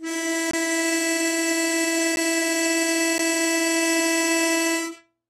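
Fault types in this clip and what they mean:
AAC compression: The music sounds dull and smeared, with plainly audible codec damage and nothing above about 12.4 kHz. This is likely low-bitrate AAC-LC, around 32 kbps, which lowers the cut-off and quantises the spectrum coarsely to save bits.
Block of digital silence: A short hole cuts into the music at 0.51 to 0.53 s (23 ms), and shorter gaps at 2.16 s and 3.18 s (12 ms each) come across as ticks or dips. The output dropped to zeros with no fade, which fits unfilled 1024- and 512-sample buffers.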